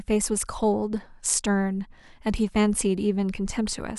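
A short speech recording with no audible technical faults anywhere in the signal.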